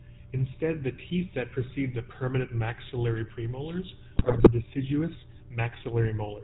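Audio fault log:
throughout GSM full-rate codec: The speech passes through the first-generation GSM coder, which models the vocal tract as a filter and excites it with sparse, regularly spaced pulses in place of the full residual signal. This leaves a plainly audible buzzy, gravelly roughness on the voice, and nothing above 4 kHz survives, so the sound is dull and band-limited. The thin, coarse quality fits a low-bitrate full-rate stream of around 13 kbps.
4.16–4.49 s GSM bit errors: Just after "the permanent maxillary premolars", corrupted bits reach the speech decoder over roughly a third of a second, which fits about sixteen consecutive 20 ms frames being hit at an error rate of a few percent. Damaged filter, pitch and gain parameters make the decoder rebuild those frames with a warped spectrum and sudden level jumps, so the voice breaks into squawks, pops and a gargling texture before returning to its steady coded sound.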